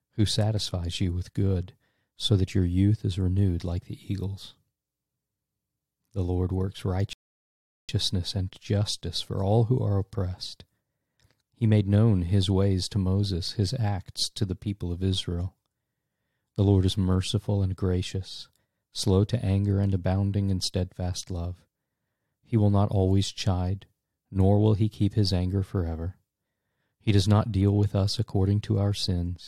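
At 7.13 s a rebuffering stall cuts the audio to silence until 7.89 s: playback ran dry and waited about 0.76 s for data, then resumed exactly where it stopped, losing nothing. The waveform shows a flat gap, the spectrogram an empty vertical band.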